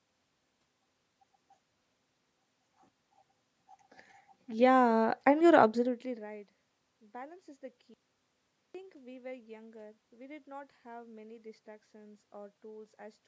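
At 7.94 s, right after "is the", the speech just drops out to dead silence until 8.75 s, so about 0.81 s of it is simply gone. That's an audio dropout to silence. Even the room noise vanishes for that stretch, which tells you the input was likely lost, through a broken link or a momentary disconnect, while the recording carried on writing silence. The talk then snaps back in mid-flow.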